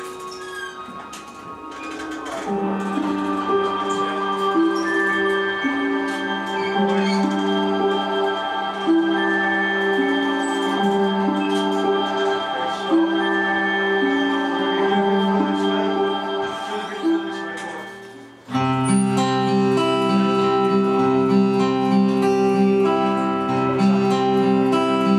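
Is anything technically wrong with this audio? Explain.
No, nothing technically wrong stood out on listening to this audio.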